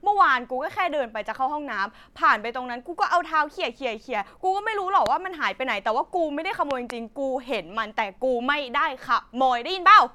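A loud pop hits at 5.06 to 5.08 s, then a double pop at 6.71 to 6.92 s. Each stands well above the speech, which carries on underneath. A sudden voltage pulse, likely from a plug, switch or static discharge, caused them.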